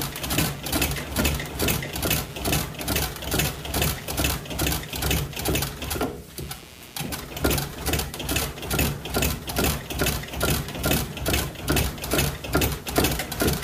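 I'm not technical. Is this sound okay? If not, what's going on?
No. From the start until about 7.1 s there's computer activity noise: a gritty buzz, pulsing roughly 150 times a second, that leaks in when the computer's workload jumps around. Unlike steady mains hum, it follows the computer's busyness rather than holding constant, then stops.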